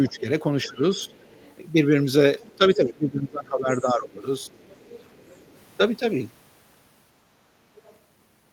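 A speech recording in which a second, faint voice sits well below the main talker from 0.05 to 1.55 s, 2.4 to 2.73 s, 4.47 to 5.6 s and briefly at 7.76 to 7.96 s. This is the other side's voice leaking through, likely because the loudspeaker playback reached the microphone and the echo canceller left residual echo behind. Where the two voices overlap, the main talker's level drops in pieces: by about 15 dB over roughly half a second between 0.08 and 1.14 s, and by about 20 dB over roughly a second and a half between 2.56 and 4.61 s. This is speech suppressed in double talk, likely caused by the canceller mistaking the near talker for echo and turning both down.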